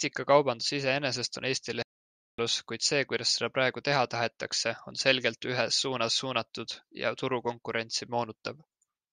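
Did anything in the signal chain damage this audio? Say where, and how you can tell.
Yes. At the playback stage there's a playback stall: the speech cuts out right after "iseenesest on" at 1.83 s and stays completely silent until 2.39 s, roughly 0.56 s, then picks up with "kuid see kuidas seda" as if nothing happened. That dead gap in mid-flow is the giveaway. Most likely the player's buffer ran dry or its thread got blocked, so output simply halted until it recovered.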